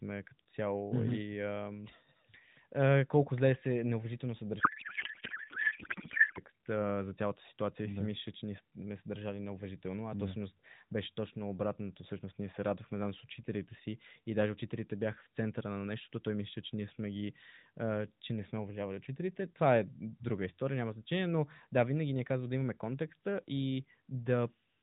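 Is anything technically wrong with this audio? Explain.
Yes. A codec payload misread runs from 4.6 to 6.4 s, between "колко зле се неуважително" and "а е за цялата". The decoder reads the frames with the wrong bit packing. The sound points to octet-aligned AMR being read as bandwidth-efficient. Every field lands in the wrong place. The speech turns into garbled noise and warble that barely follows it. Throughout the clip, the narrowband AMR coding shows light damage, which fits about 12.2 kbps.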